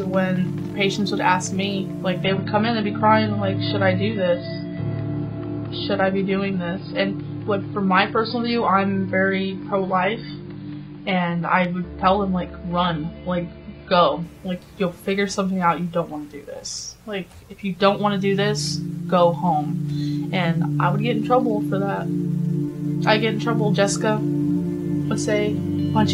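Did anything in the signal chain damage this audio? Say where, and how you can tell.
Yes. An adaptive stream at a lower bitrate, from the network stage, runs from 2.24 to 14.24 s. Nothing sounds above 5 kHz, and the switch is abrupt and gapless. That fits a drop to roughly 16 kbit/s AAC.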